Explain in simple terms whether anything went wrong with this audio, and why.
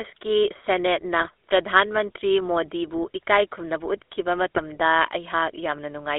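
The speech went through the GSM full-rate codec, an early mobile-phone coder that rebuilds the voice from a simple model of the throat driven by pulses. Here it keeps only about 300 Hz to 3.6 kHz, so the whole clip sounds thin, buzzy and gravelly.

There are also GSM bit errors, where a weak radio link corrupted the data the decoder relies on. The sound briefly squawks and gargles from 1.18 to 1.30 s, and again from 4.55 to 4.60 s.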